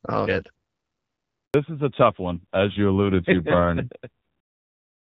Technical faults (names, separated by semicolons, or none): handover gap; fallback to narrowband